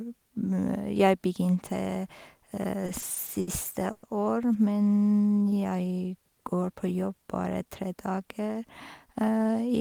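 Repeated stalls (stutter) run from 2.86 to 3.49 s. The speech halts five times as packets arrive late and the jitter buffer keeps emptying. Each gap, the longest 70 ms, is bridged by stretching the last sound, about 150 ms in all, so the passage drags and stutters.

A call audio freeze follows at 3.92 to 4.05 s. For 110 ms the last sound is held as a fading buzz or hiss, never dropping to silence, before speech resumes where it stopped. The likely cause is packets held up in transit, adding 110 ms of delay.

Jitter buffer slow-down affects 5.21 to 5.61 s, just before "jeg går på jobb". Single pitch periods are repeated to rebuild a depleted buffer reserve, adding 78 ms. Speech runs at 83% speed with unchanged pitch, sounding drawn out.

Jitter buffer speed-up covers 7.54 to 8.62 s, after "jeg går på jobb". With excess audio queued, the receiver trims short pitch-period slices, about a tenth of a second in total. 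Speech plays at 109% speed at the same pitch and sounds hurried.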